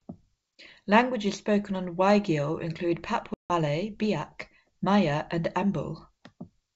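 At 3.34 s there's a packet loss on the ADPCM call: a hard-edged silent hole of about 160 ms, which fits something like seven lost packets. The decoder's predictor and step size drift out of step with the sender's, so when the speech comes back at 3.51 s it lands with a bit of distortion before settling, over G.722 wideband coding that otherwise stays clean.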